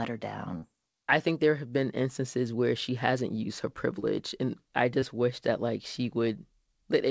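Three brief smears interrupt this speech recording, at 0.58–0.64 s, 4.00–4.04 s and 5.00–5.04 s. Each is short concealed packet loss: roughly 40, 20 and 20 ms of audio missed the decoder, and the receiver bridged each gap by extending the preceding sound before blending back in. The call path's cutoff at 8 kHz fits G.722 at 64 kbps.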